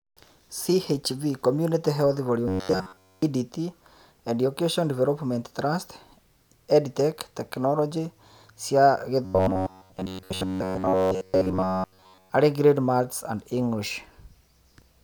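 From 2.48 to 3.22 s, just after "community health", the speech collapses into a rigid, metallic buzz at 93.8 Hz that only loosely tracks the words, and the same robotic sound returns from 9.25 to 12.30 s, covering most of that stretch. This is likely robotic sound from repeated short buffers: audio arrived too slowly, so a fragment of about 10.7 ms was looped over and over, imposing that fixed pitch while the real signal was skipped.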